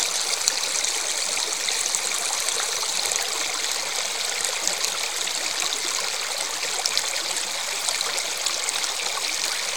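At 3.07 s there's a brief glitch from damaged data in the compressed stream: corrupted bytes threw the decoder off sync until it found the next frame header.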